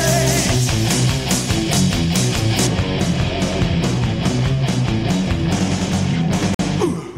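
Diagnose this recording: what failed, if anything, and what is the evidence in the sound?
Two things went wrong. From 2.67 s to the end the top end drops away: the treble slopes down smoothly, ending about 13 dB lower at 10 kHz than at 1 kHz, so everything turns dull and muffled. That's de-emphasis applied wrongly, somewhere in playback or sample-format processing. A treble-cut curve meant to undo pre-emphasis got applied to audio that never had any, or got applied a second time, and it stays on from that point.

Then at 6.54 s the sound cuts to silence for about 50 ms and resumes at 6.59 s. That short dropout is likely a Bluetooth stall at the playback stage. Interference would have held up packets on the wireless link, the headphone buffer ran dry, and output paused until the resent packets arrived and filled it again. The gap is short, so the listener hears a clean hole rather than any smearing.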